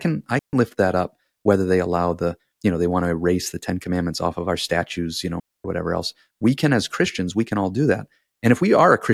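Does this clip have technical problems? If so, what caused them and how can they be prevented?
Yes. The speech twice drops into a clean hole of near silence with no burst of noise on either side: from 0.39 to 0.53 s (about 140 ms), just before "lift that up whether", and from 5.40 to 5.65 s (about 250 ms), between "our statues you know" and "whatever else we can". This is a digital wireless dropout. The receiver lost too much of the data stream and briefly faded to mute. To prevent it, keep a clear line of sight between transmitter and receiver, with fresh batteries and a clean frequency.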